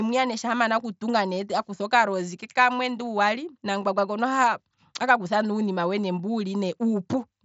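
Nothing goes wrong in this speech clip, which comes through the Bluetooth mSBC headset link with that codec's usual wideband reach up to about 8 kHz.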